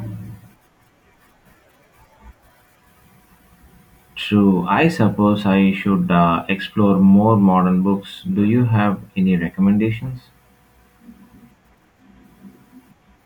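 No technical faults are audible anywhere in the speech recording.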